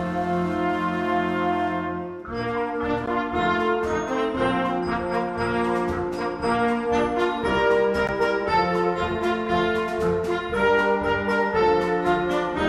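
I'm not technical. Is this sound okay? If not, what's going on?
No. There is a gap between chunks: the audio is joined from 5-second pieces, and a 13 ms silence interrupts it at 3.06 s and 8.07 s.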